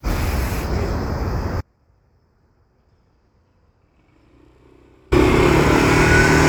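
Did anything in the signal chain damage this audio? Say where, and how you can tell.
Yes. From 1.61 to 5.12 s the sound drops out abruptly, leaving only a faint residue roughly 40 dB below normal for about 3.5 s. This audio dropout to a faint residue likely comes from an interrupted analogue connection while the downstream path stayed live.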